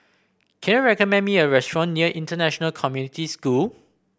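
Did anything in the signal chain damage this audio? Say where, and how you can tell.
No, nothing in the chain audibly damaged this speech recording, and no stage leaves a trace worth flagging.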